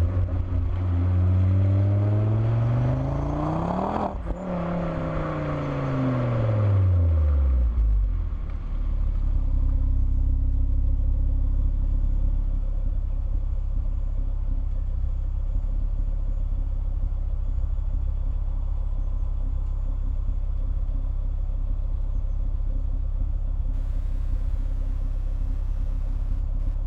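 From 23.73 s to the end at 26.86 s there's computer activity noise: a faint buzzy chirping, pulsing around 150 times a second, from processor or graphics load shifting the shared audio ground.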